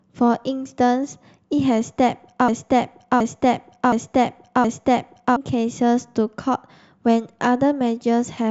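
Speech clip with a broken-record loop from 2.48 to 5.36 s: a 0.72 s fragment repeats four times back to back, likely a stalled player or stream resending its last chunk, so that stretch is lost.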